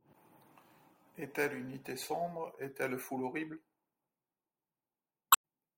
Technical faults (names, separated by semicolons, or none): damaged data in a compressed stream